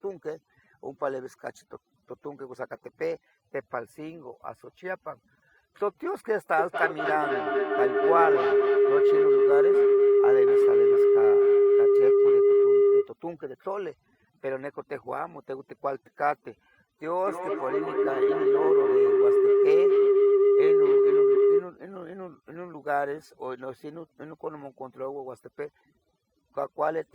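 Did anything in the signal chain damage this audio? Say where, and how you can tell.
Yes, two kinds of damage, both in call processing or the acoustic path around the call.

Overdone noise removal affects the whole clip. The pauses between phrases drop to near silence with small twinkling specks. That points to a noise suppressor set far too aggressively. It pulls individual frequency bands down or out whenever they sit near its noise estimate, so the softer parts of the speech are removed along with the background.

A feedback howl appears twice, from 6.58 to 13.17 s and again from 17.05 to 21.74 s. Each time a tone near 400 Hz builds up, pulsing roughly five times a second, and peaks at about 8 dB above the speech. This is an acoustic loop, with two devices on the same call in one room. Each pass through microphone, call, and loudspeaker adds level, and the loop settles on the frequency it favours. 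The pulse rate follows a loop delay of around 200 ms.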